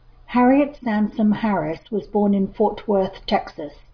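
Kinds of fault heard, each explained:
No faults heard in it.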